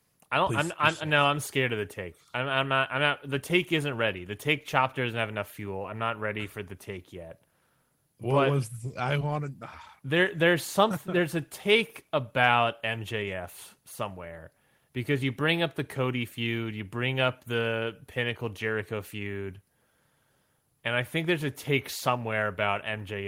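At 5.82 to 5.84 s, between "doesn't have enough fuel" and "I'm not ready for", and again at 9.19 s, short concealed packet loss drops about 10 ms of audio. The decoder extends the preceding sound to cover the gap, leaving a brief smear or wobble.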